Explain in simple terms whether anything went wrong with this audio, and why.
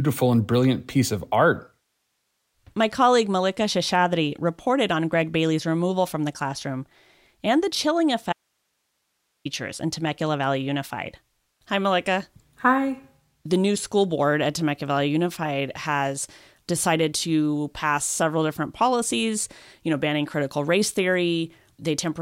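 Something did go wrong: there's an audio dropout to a faint residue between 8.33 and 9.45 seconds. For a bit over a second the speech just vanishes, and all that's left is a soft hiss sitting way below the normal level. It cuts out and snaps back abruptly, so it doesn't sound like a natural pause. The likely cause is that the signal feeding the recording was briefly lost while the rest of the chain stayed switched on, recording only its own background noise.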